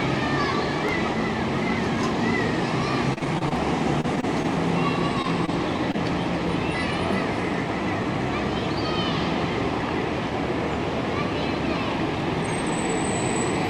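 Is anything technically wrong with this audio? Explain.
Yes. From 3.13 to 3.53 s and again from 4.01 to 4.46 s the sound turns choppy and robotic. This is repeated packet loss: six and then four gaps, each up to about 30 ms, are patched by extending the previous sound.

At 5.22 s and 5.92 s there is a brief smear where about 20 ms of sound is missing. This is short concealed packet loss, with the decoder continuing the last sound over each gap.

At 5.46 s a sound is held slightly too long, with a faint buzz, but nothing is missing. This is a short stall from a late packet: the jitter buffer ran dry and the last sound was stretched for about 18 ms until the packet arrived.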